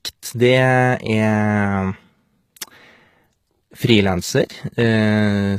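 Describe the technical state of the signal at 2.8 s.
At 2.8 s, as throughout, likely HE-AAC compression at a low bitrate rebuilds the treble from copied lower bands, leaving gritty, lispy s sounds and nothing above 14.9 kHz.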